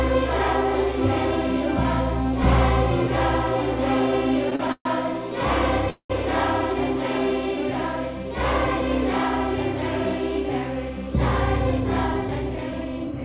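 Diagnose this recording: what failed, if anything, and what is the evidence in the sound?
Repeated stalls (stutter), network and jitter buffer stage. Between 4.50 and 4.87 s the audio halts four times. The longest gap is 131 ms. Continued sound fills about half that span, and nothing is lost.

Call audio freeze at 5.90 to 6.12 s. The last sound is stretched for 196 ms and ends in 90 ms of silence. Then the audio resumes where it stopped. This likely comes from packets held up on the network, which emptied the jitter buffer.

Jitter buffer speed-up from 11.58 to 13.22 s. The audio runs at 110% speed with unchanged pitch and sounds hurried. Trimming short pitch-period pieces removed about 150 ms of backlog.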